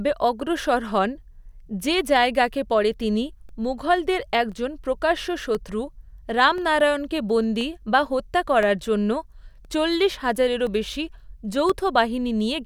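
From 3.49 s to 11.70 s, periodic USB or driver dropouts tick every 1.02 s. About ten brief gaps, each roughly a millisecond of silence, punctuate the speech.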